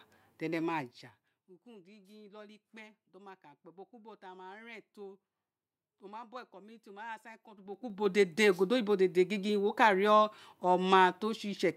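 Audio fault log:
7.54 to 8.13 s, zipper noise: the speech level changes by roughly 20 dB in audible stairs of about 3 dB each, at around fifteen steps a second, and every unsmoothed jump leaves a small click, so a ticking zip rides on the sound while the level moves. This change is heard as a string of separate little steps.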